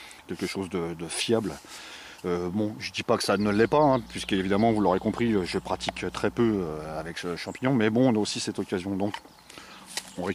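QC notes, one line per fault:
3.39 to 7.13 s, mains hum: a steady 60 Hz drone, sitting roughly 20 dB under the sound, likely a ground loop or nearby transformer leaking power-line current in.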